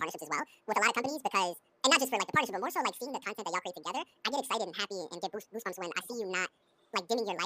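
A speech clip read two samples at a time (double speed) from start to finish. It plays at 2.0 times speed, an octave high, because pairs of samples are treated as one frame.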